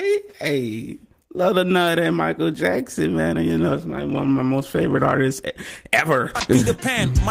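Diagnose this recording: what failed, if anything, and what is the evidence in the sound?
The fault is a call bitrate drop at the codec stage. The call's bandwidth estimate fell, and the encoder was told to spend far fewer bits, which fits a fall from 32 to 16 kbps. From 3.7 s the sound turns rougher and more coarsely coded, staying at its worst for about 1.33 s, before detail returns by 5.89 s as the bitrate recovers. With fewer bits per frame, fine spectral detail is quantised away.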